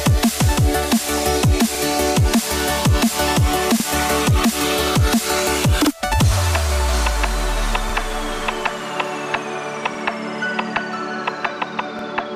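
Overlapping chunks at 1.75–1.80, 3.80–3.85, 5.85–5.90, 7.90–7.94, 9.94–9.99 and 11.99–12.04 s: the audio was handled in 2-second chunks, each starting about 48 ms before the last ended, so that slice plays twice at every join, giving a regular stutter-click.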